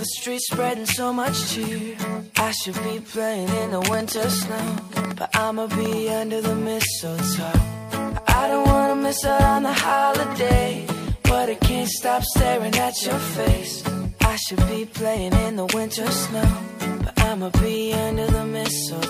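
From 3.82 s to 5.94 s, a burst of sharp ticking sits on top of the sound: about fifteen near-identical pops at roughly 7.6 per second, spaced unevenly rather than in a steady beat, with peaks about 10 dB above the surrounding audio so they stand out clearly. This train of clicks is likely caused by repeated impulses from interference or a faulty connection or power supply, each spike adding the same brief transient wherever it lands.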